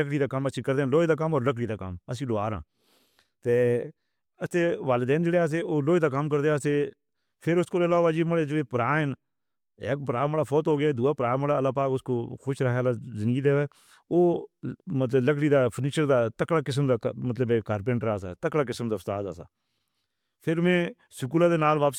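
No technical faults can be heard anywhere in this speech recording. Nothing in the sound stands out as needing a timestamp or a closer look.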